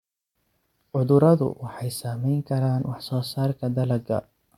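A listener hears a speech recording with no technical faults in the signal.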